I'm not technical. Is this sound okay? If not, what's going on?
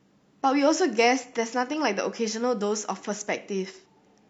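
Yes, this sound is okay, and nothing is going on with it that needs fixing.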